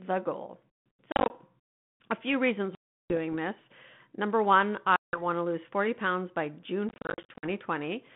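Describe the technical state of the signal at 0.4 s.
At 0.4 s the speech is intact, carried through the 32 kbit/s G.726 ADPCM telephone path with its roughly 150 Hz to 3.5 kHz band and only light coding roughness, and nothing there marks a fault.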